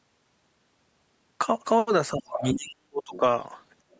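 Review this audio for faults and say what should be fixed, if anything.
Between 2.13 and 3.23 s the speech dips and breaks up for about a second in total, at its deepest roughly 40 dB down. This is likely speech suppressed in double talk: the echo canceller couldn't separate the talker from loudspeaker echo, so it attenuated both. Tuning the canceller's double-talk detector to hold near-end gain while both sides speak would prevent it.

A second, fainter voice sits under the speech at 2.36–2.51 s (about 10 dB below it), 3.02–3.20 s (about 20 dB below) and 3.91–3.97 s (about 40 dB below). This is likely the other side's voice leaking through, meaning loudspeaker playback the echo canceller didn't fully remove from the microphone. Stronger residual-echo suppression or a headset would prevent it.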